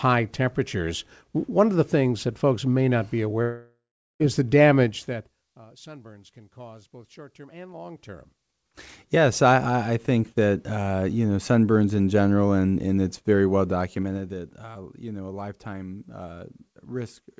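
At 3.42 s, after "folks may not be", the sound smears into a fading buzz, then about 0.41 s of silence until 4.22 s, likely a long network dropout losing 0.78 s. From 13.64 to 14.54 s, between "and it's very well" and "uh you know a", zipper noise ticks about seven times a second as the level falls roughly 10 dB in unsmoothed 2 dB steps.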